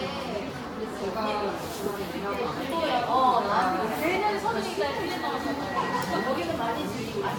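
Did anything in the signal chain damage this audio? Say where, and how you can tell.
Yes, at the codec stage, throughout the clip: generation loss. The audio sounds swirly, hollow and smeared, with blurred attacks and nothing above 18.9 kHz. That is more damage than one encode at the rate the band limit suggests, likely from roughly seven Vorbis re-encodes, each adding fresh quantisation holes.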